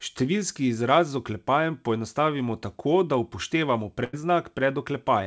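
A speech recording carried over a WebRTC call path whose content stops at 8 kHz, consistent with a wideband codec such as G.722 at 64 kbps, with one fault: a burst of packet loss from 4.04 to 4.15 s. For about 91 ms the receiver extends the last sound and fades it, so the audio turns into a held buzz or decaying hiss before resuming further on. On a spectrogram this shows as smeared, steady harmonics or noise losing energy; the waveform shows a repeated, shrinking pattern, then an abrupt jump.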